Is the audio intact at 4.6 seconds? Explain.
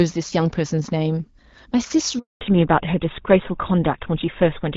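No. At 4.6 s you're inside a fallback to narrowband that starts at about 2.41 s and runs to the end. Before that the call is carried on the AMR wideband (HD Voice) codec, with only light coding damage. From 2.41 s the link drops to an older narrowband codec, likely GSM full rate, which can only carry up to 4 kHz. Everything above that is simply gone, so the voice turns duller and rougher.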